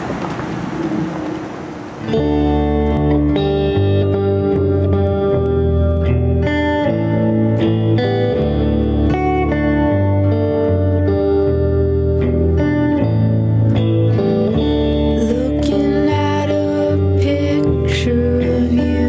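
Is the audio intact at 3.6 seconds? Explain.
No, gain pumping runs through the whole clip, including 3.6 seconds: the gain swings by around 10 dB, likely from excessive gain driving a fast limiter.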